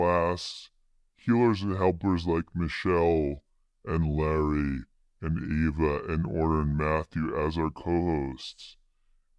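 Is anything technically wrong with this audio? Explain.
Yes. A wrong sample rate runs through the whole clip, from start to finish. The samples are being played back slower than they were captured, with no conversion in between, so speed and pitch drop together by the same ratio. Everything runs at about 0.69 times normal speed and sits about 6.5 semitones low, which fits audio recorded at 32 kHz being played at 22 kHz. The speech sounds noticeably deeper, slower and drawn out.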